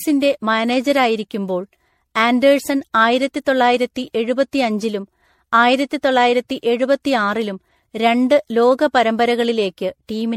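Repeated lossy re-encoding, likely MP3 passes at a rate consistent with 64 kbit/s, run around seven times over, has left this speech recording with generation loss throughout. Each round requantises the signal on a shifted frame grid, so the errors stack: the sound is swirly and hollow, smeared well beyond what one pass at that rate would cause, consonant attacks are blurred, and nothing is present above 16.4 kHz.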